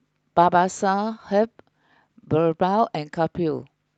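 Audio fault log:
No faults are heard in this speech clip. It has passed through a WebRTC call path, and its top end stops at about 8 kHz, which fits an Opus call codec set to that bandwidth.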